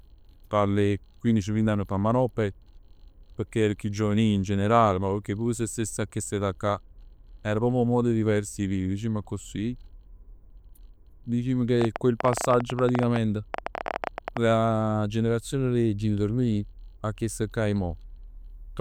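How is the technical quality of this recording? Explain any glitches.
The recording has one clear defect, a train of clicks. From 11.82 to 14.38 s, about forty similar sharp clicks arrive at roughly 13.7 per second, irregularly spaced and peaking around 15 dB above the speech. Such repeated pulses likely come from electrical interference or a faulty connection or power supply, and they cut through as popping ticks.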